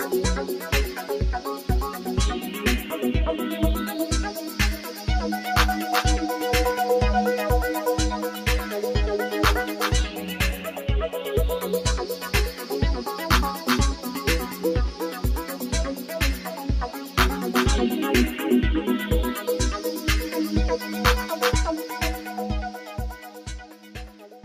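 A noise suppressor applied to music or sounds stays active through the whole clip, treating sustained material and decays as noise and pulling them down by roughly 10 dB. Held tones thin and flutter while attacks mostly pass, which separates it from a compressor, whose pumping follows overall loudness. The sound is cut by the noise suppressor, dipping about 5 dB at 4.35–4.59, 4.78–5.04, 10.1–10.34, 10.57–10.81 and 12.53–12.71 s, and about 7 dB at 16.95–17.17, 23.22–23.47 and 23.65 s to the end. These are sagging sounds, not the abrupt silences of dropouts.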